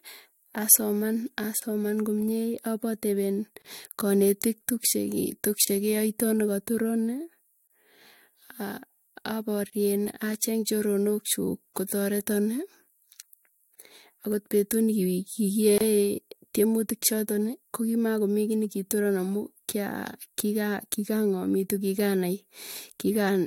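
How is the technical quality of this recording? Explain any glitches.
The speech has a recurring glitch: gaps at joins of encoded pieces, at 1.60, 3.62, 5.65, 7.67, 9.70, 11.73, 13.75 (just before "akot petuu") and 15.78 s. The pieces were encoded separately and joined untrimmed, so encoder start delay and end padding leave silences of 23 to 27 ms about every 2 s. Each one sounds like a brief dropout with smeared edges, and the speech then picks up where it stopped.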